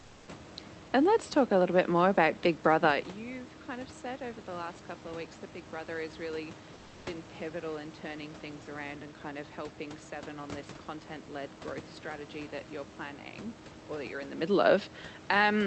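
Comfort noise in place of the background, 0.00 to 0.27 s: smoother synthetic noise, about 3 dB quieter, replaces the room sound, likely because transmission paused during silence.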